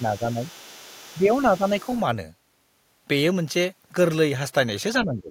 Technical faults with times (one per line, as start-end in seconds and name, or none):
0.00-0.41 speech suppressed in double talk
0.29-1.43 other side's voice leaking through
1.18-1.32 speech suppressed in double talk
1.58-1.64 speech suppressed in double talk
1.69-2.01 other side's voice leaking through
5.00-5.31 speech suppressed in double talk